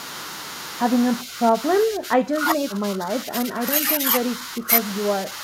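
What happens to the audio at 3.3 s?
The speech is suppressed in double talk from 2.57 to 3.62 s. It dips roughly 10 dB. An echo canceller likely turned it down while both sides talked.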